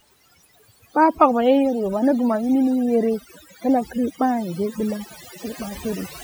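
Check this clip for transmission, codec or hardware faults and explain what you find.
One fault runs through the speech. Overdone noise removal, throughout: an over-aggressive reduction stage cuts frequency bands near its noise estimate, leaving a twinkling near-silent background.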